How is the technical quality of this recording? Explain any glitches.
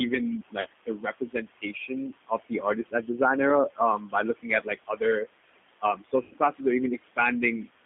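The technical quality is poor. The speech has narrowband codec damage and heavy noise processing, with several dropouts on top.

Noise suppressor artifacts run throughout. The suppressor lowers the room noise, which sits about 12 dB below the speech, by about 17 dB frame by frame.

The G.729 codec, also throughout, passes only 200 Hz to 3.5 kHz at 8 kbit/s. It rebuilds the voice from a filter and pulses, so it sounds rough and synthetic.

Speech cut by the noise suppressor occurs from 0.5 to 3.19 s, 3.75 to 5.27 s and 5.81 to 6.61 s. The drops reach about 21, 20 and 16 dB. The suppressor mistook soft speech for noise, so the affected parts sound swallowed or faint.

VoIP packet loss concealed by the speech codec occurs at 0.61 to 0.67 s and 6.23 to 6.34 s. About 40 ms and 80 ms were lost. The decoder stretched the last sound into a fading tone or noise, and the voice stays weak briefly afterwards.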